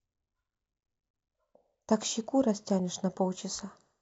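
No faults to report: nothing in the recording stands out as a technical problem at any point.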